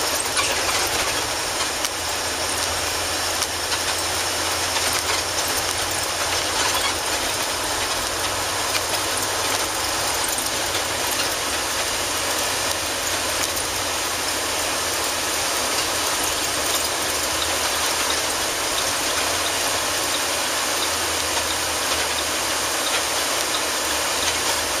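No technical faults can be heard anywhere in the recording; the signal holds steady throughout, with no breaks, distortion or interruptions.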